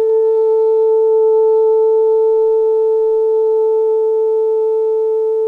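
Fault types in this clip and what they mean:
Nothing to flag in this bit of music; there's no fault to list here.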